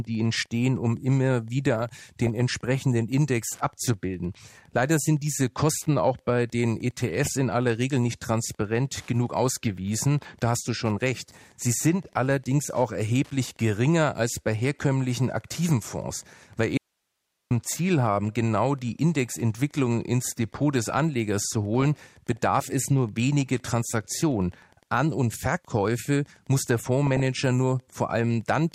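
A Wi-Fi radio sitting close to the audio circuitry has its transmissions rectified into the signal, producing Wi-Fi interference that runs the whole length of the clip. The beacon repeats every 102.4 ms, so a steady ticking at roughly ten per second sits under the speech, around 40 dB below it. It is faint but constant.

DAB burbling comes from weak reception letting bit errors slip past the error correction into the MP2 data, at an error rate of a fraction of a percent. Corrupted samples put short blips of noise into single sub-bands, and corrupted scale factors make sub-bands leap in level for up to a frame. The result is burbling laid over the speech at 1.75 to 2.29 s, 3.43 to 3.50 s, 6.97 to 7.29 s, 14.93 to 15.05 s, 21.74 to 22.44 s and 27.07 to 27.25 s. The longest bursts, at 1.75 s and 21.74 s, point to some thirty-odd damaged frames each.

From 16.77 to 17.51 s there is an audio dropout to a faint residue. 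The speech cuts out abruptly for about 0.73 s and leaves only hiss, roughly 55 dB below the normal level, before returning just as suddenly. The break is too sharp to be a pause or a fade. It was likely caused by the wanted signal being lost upstream while the path after the break stayed live and passed its own noise.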